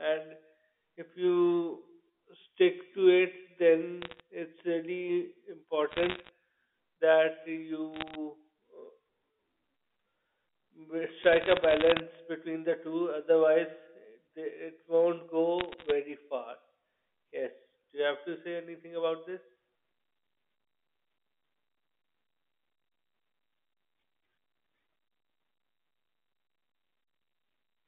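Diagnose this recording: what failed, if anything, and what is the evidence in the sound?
Bit errors on a digital phone line at 4.02–4.20, 5.89–6.29, 7.94–8.15, 11.22–12.00 and 15.59–15.92 s: sharp ticks and crackle over the speech, as flipped bits at well under one percent corrupt single A-law samples in transmission.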